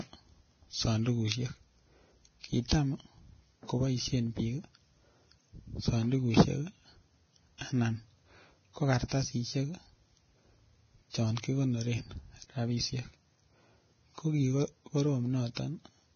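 From the start to the end, the speech sounds hissy and grainy. Nothing is heard above 6.5 kHz. The damage is heavy and points to a low bitrate, around 18 kbps. Vorbis compression is the likely cause. Coarse treble quantisation has turned fine detail into noise.

Pre-echo comes at 2.68 to 2.72 s, 7.58 to 7.61 s, 9.08 to 9.11 s, 11.42 s, and 15.55 to 15.57 s. Each sharp attack has a short hiss just before it, between 19 and 39 ms long. Block noise sized for the loud onset leaks into the quiet before it. The attacks sound smeared.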